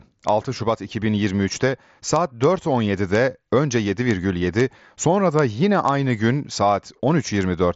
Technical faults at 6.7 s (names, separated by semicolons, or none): none